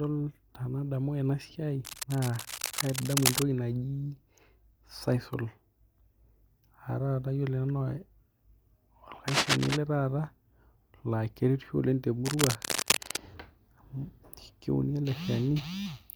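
Cable scratch noise appears three times: from 1.85 to 3.42 s, just after "tenadamu ena siai", then from 9.28 to 9.77 s and from 12.25 to 13.19 s. Dense, irregular bursts of scratching and rustling sit over the speech, a little below the voice in the first stretch and roughly as loud as it in the later two. The likely cause is a worn cable or connector being moved, its contact resistance jumping rapidly.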